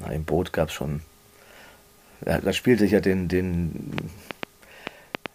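Likely interference or a faulty connection injects a train of clicks from 3.98 to 5.27 s: about seven irregular pops, nearly 4 per second, standing roughly 20 dB above the audio.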